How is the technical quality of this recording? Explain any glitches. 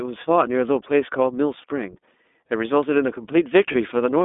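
Technical quality is limited: the speech has passed through a narrowband voice codec, and two short dropouts are concealed by the decoder.

The iLBC codec runs throughout. The line passes only about 250 Hz to 3.6 kHz, so the speech is thin and boxy, with no air above. iLBC codes each 20 ms frame's excitation independently rather than predicting from the previous frame, which leaves a plainly audible rough, slightly synthetic grain, consistent with its 15.2 kbps mode. Unlike a smoother codec that only band-limits, this texture sits on every voiced sound.

There are lost iLBC frames at about 1.62 s and 3.72 s, each a single 20 ms frame. The decoder fills each gap by repeating the last pitch cycle blended with noise, so the sound briefly holds as a faintly buzzy, breathy smear instead of falling silent. Because iLBC frames don't depend on earlier ones, the speech snaps back cleanly at the next frame. 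Concealment in predictive codecs would instead leave a longer tail of distortion.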